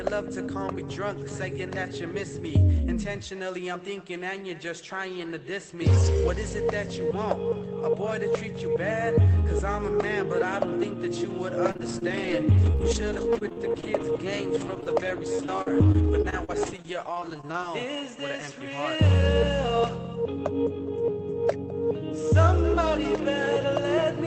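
From 11.63 to 17.64 s there is repeated packet loss, giving a robotic sound. Packets keep going missing. Each short hole, at most 45 ms, is filled by stretching the previous sound. This leaves a choppy texture with pieces missing, over a call path whose top end stops near 8 kHz.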